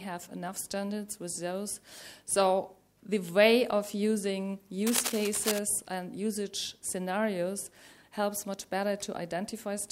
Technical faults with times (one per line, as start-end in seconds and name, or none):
4.86-5.59 cable scratch noise